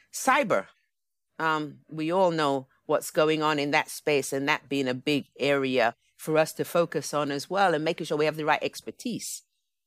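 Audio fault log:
No technical faults are present; the speech signal holds steady with no break, distortion or dropout anywhere in the clip.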